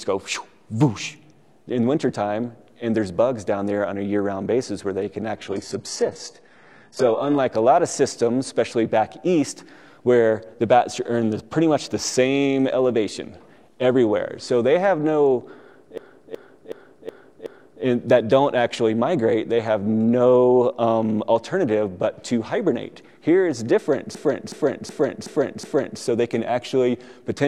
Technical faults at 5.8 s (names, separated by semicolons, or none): adaptive stream at a lower bitrate